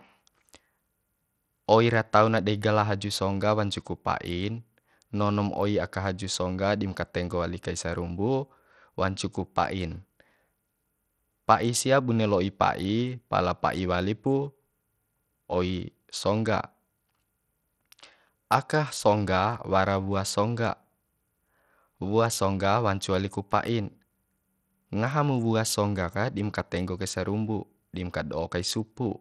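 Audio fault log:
Throughout, Bluetooth SBC compression: the speech sounds dulled and gritty, with the treble thinning out and flickering rather than holding steady, and a coarse noise riding along with it. The likely cause is the SBC codec running with a small bit pool, which fits a low rate of about 80 kbps. Its sub-bands get too few bits, so the weak upper bands starve and the remaining ones are roughly quantised, leaving plainly audible damage.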